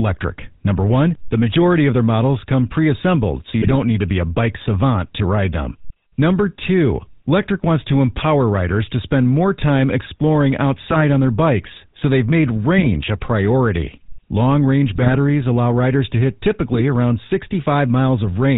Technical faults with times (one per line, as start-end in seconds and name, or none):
0.00-18.58 GSM full-rate codec
3.62-3.75 GSM bit errors
8.16-8.25 GSM bit errors
10.90-11.01 GSM bit errors
12.76-12.87 GSM bit errors
14.92-15.16 GSM bit errors
16.70-16.81 GSM bit errors